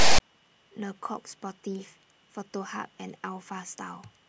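Right at the start, from 0.0 to 0.2 s, there's file tags played as audio: text metadata read as samples gives a lopsided, hard-edged rasp, then padding drops to silence.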